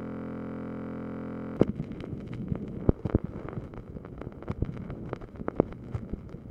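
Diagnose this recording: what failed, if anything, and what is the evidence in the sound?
A system hang loop at the driver or buffer stage: one 23.2 ms block, fitting a 1024-sample buffer, repeats from the start to 1.57 s as a steady 43.1 Hz buzz.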